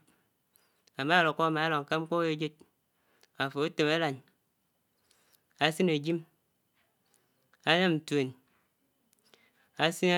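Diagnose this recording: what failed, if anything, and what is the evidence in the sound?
Nothing failed in this speech recording, and no stage of the chain leaves an audible mark on it. Listening through gives no evidence that points to a fault anywhere in the sound.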